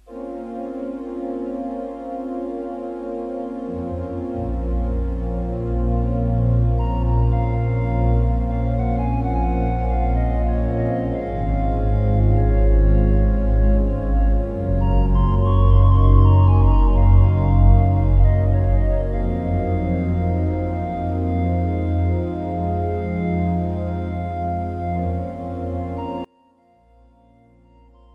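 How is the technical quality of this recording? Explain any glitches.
One glitch stands out near the end. From 26.25 s to the end at 28.15 s, the audio suddenly falls by about 31 dB, background included, leaving only a small residue. The likely cause is one channel inverted: with one stereo side's polarity reversed, everything shared between the channels cancels when they are summed to mono, and only their difference survives. Unlike a dropout or mute, the sound never goes fully silent, and unlike a fade, the drop is immediate rather than gradual.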